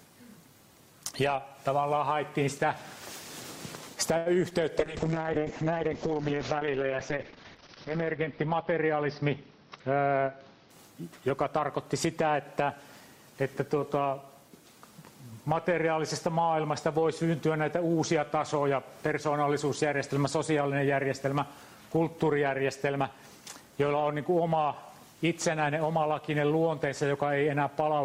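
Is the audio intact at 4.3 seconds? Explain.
No, not fully. At 4.3 s the sound sits inside a short stall from a late packet, running from about 4.17 to 4.35 s. A packet arrived late, the jitter buffer emptied, and the receiver held the last sound for about 84 ms before continuing from the same point. Nothing is lost, but that sound lingers too long with a slight buzz or dip. On a spectrogram the frequency bands run flat and unchanging, and the waveform repeats one cycle shape until the stream resumes.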